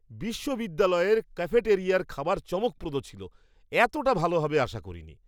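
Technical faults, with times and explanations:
No technical faults can be heard in this speech clip. There is nothing to mark at any point in it.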